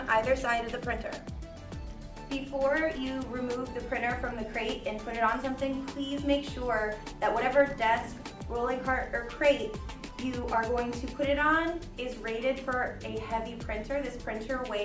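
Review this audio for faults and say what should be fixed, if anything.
No technical faults can be heard anywhere in the recording. Nothing needs to be fixed.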